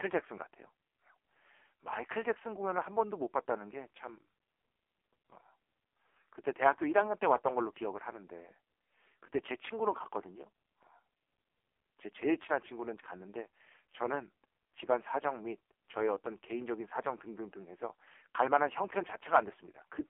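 Speech passed through an AMR narrowband mobile codec throughout: everything stops near 3.5 kHz, a hard empty ceiling on a spectrogram, with little below 300 Hz, and the voice sounds heavily buzzy and synthetic, which fits a low AMR-NB rate, around 5.15 kbps.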